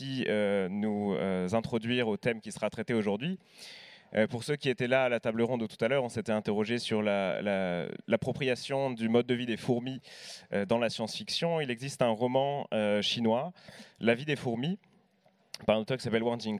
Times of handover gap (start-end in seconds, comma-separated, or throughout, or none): none